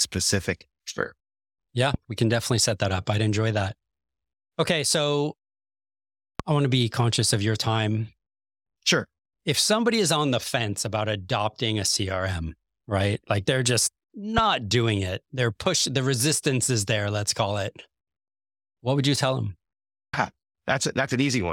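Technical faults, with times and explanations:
1.94–1.97 s, 6.40–6.42 s and 14.38–14.40 s, loud pop: each is a single sharp pop lasting only a couple of hundredths of a second, standing well above the speech, roughly 15 dB louder for the first two and somewhat less, about 10 dB, for the third, while the talking continues unbroken beneath. Each is likely a brief voltage spike, from static, a switch or a driver glitch, added to the signal and shaped by the following circuitry into an audible click.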